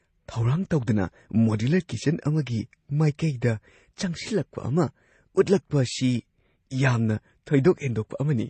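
From start to finish the speech sounds dull and smeared, with nothing above about 8.3 kHz, and two layers of coding damage mix in it: watery, swirling artefacts plus a second layer of grainy roughness. This is likely transcoding between lossy codecs. The artefacts point to a low-rate MP3 stage, around 32 kbit/s, followed by AAC-LC at a similar rate. The second codec wasted bits re-encoding the first codec's damage, and the lower cut-off persisted.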